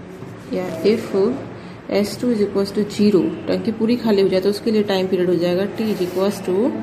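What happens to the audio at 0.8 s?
A burst of loose connector crackle runs from 0.69 to 0.77 s, a contact making and breaking; the waveform shows jagged dropouts and spikes, broadband vertical streaks on a spectrogram.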